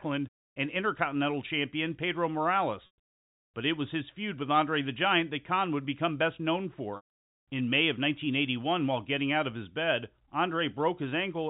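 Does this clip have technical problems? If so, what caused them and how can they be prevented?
Yes. Packet loss with pitch repetition occurs at 2.86 to 2.98 s (120 ms missing) and again at 6.96 to 7.09 s, just after "would become best known", where 220 ms is missing across a 320 ms stretch with a longest gap of 140 ms. Missing packets in the telephone-band stream were concealed by repeating the last pitch period, which gives a held, buzzy tone fading toward silence. Prevention: use a more reliable network path, with forward error correction and a larger jitter buffer.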